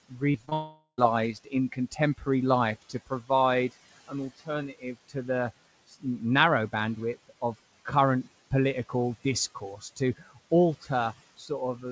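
From 0.09 to 2.27 s the noise suppressor cuts into the speech, mistaking roughly two-thirds of a second of it for noise and pulling it down by up to about 18 dB, so bits sound swallowed. Inside that stretch there's short concealed packet loss at 0.32–0.36, 0.46–0.49 and 0.49–0.53 s: the receiver patches each gap by carrying the last sound forward, giving quick smears or wobbles. Right after, 0.53 to 1.00 s goes to a fading buzz or hiss and then a brief hush before sound returns, likely a long network dropout. The suppressor bites again from 2.82 to 5.15 s, just before "the narrow bandwidth of", dipping up to about 16 dB over roughly 0.4 s. It does the same from 9.55 to 11.50 s, after "bandwidth of current political", this time up to about 11 dB over roughly 0.3 s.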